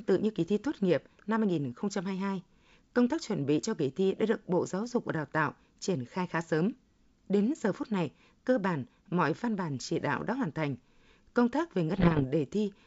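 From 11.94 to 12.25 s, just after "tác về", the G.722 stream suffers bit errors on an ADPCM link, at a rate of roughly one to two percent. Each flipped bit throws off the decoder's step size and prediction, so the speech breaks into pops and rough, briefly louder or quieter bursts.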